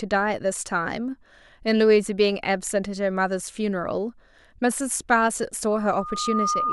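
A microphone was picking up the loudspeaker it fed, and at 1.2 kHz the loop gain climbed past one, producing loudspeaker feedback squeal. From 5.71 s a single steady tone at that frequency emerges from the speech and swells over roughly three quarters of a second. It reaches about the same level as the talker and then holds as a piercing whistle until the clip ends at 6.72 s.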